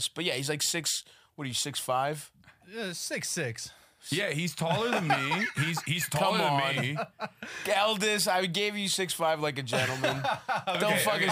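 Sample clock jitter runs through the whole clip. The converter's clock wanders, so each sample lands a little early or late. The timing error is a few microseconds. That error matters most where the waveform changes fast. So the added noise tracks the signal, sitting roughly 30 dB below it. It sounds like a grainy hiss riding on loud and bright passages. It thins out on quiet parts and disappears in silence.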